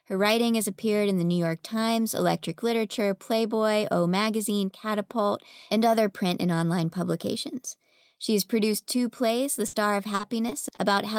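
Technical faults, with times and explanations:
9.67–9.75 s, burst of packet loss: a 60 ms hole in the speech is filled by stretching the last sound and letting it fade, and about 60 ms of speech is skipped on resumption. A spectrogram shows smeared, repeated harmonics decaying, then an abrupt jump.
10.15–10.79 s, repeated packet loss (robotic sound): four short gaps, the longest 40 ms, are each patched by continuing the preceding sound, about 100 ms in total, 16% of the stretch, giving choppy speech with pieces missing. The waveform shows repeated, flattened segments and discontinuities.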